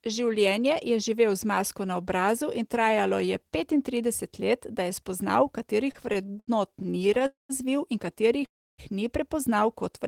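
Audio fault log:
5.91–7.22 s, repeated stalls (stutter): Just after "let da je spoznal" the sound halts 16 times, with the longest halt lasting 79 ms. Each halt is patched by stretching the last sound. These patches fill 258 ms, about a fifth of the span. The packets kept arriving late, so the buffer kept running dry. Nothing is lost, but the audio drags.
7.26–7.51 s and 8.45–8.80 s, call audio freeze: The sound holds and then fades. The first freeze fills 231 ms and ends in 150 ms of silence. The second fills 330 ms, with 300 ms silent, before "ni prepoznal". Packets were likely held up in transit. Playback then resumes where it stopped, so gaps are added and nothing is lost.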